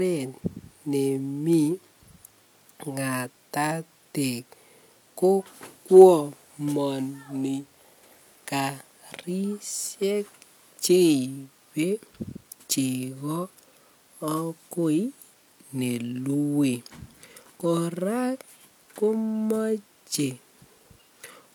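A speech recording with no technical faults to report.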